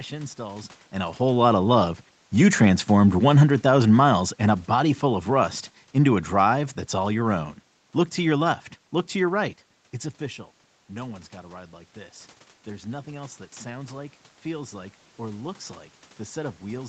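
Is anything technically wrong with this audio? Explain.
Yes. From 3.12 s to 7.45 s the speech sinks steadily by about 7 dB, and the room noise behind it fades by the same amount. This is automatic gain falling: the gain control judged the input too loud, or its background noise too strong, and lowered its gain gradually.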